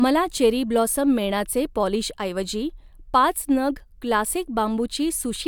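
Nothing in this bit of speech calls for comment, as there's no technical fault to point to anywhere in it.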